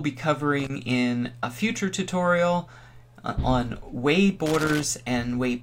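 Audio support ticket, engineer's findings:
Irregular crackle and scratching bursts at 0.60 to 0.70 s (about 0.1 s) and 4.46 to 4.83 s (about 0.37 s). Loose connector crackle. Probable component: worn or dirty connector contact on the signal line. Mechanism: contact intermittently making and breaking under movement, chopping the audio, with pops from any DC step as the circuit opens and closes. Second burst longer. Reseat or clean connector; replace if worn.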